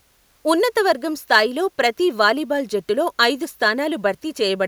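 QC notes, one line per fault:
No faults were heard in this speech clip. There is nothing to log against it.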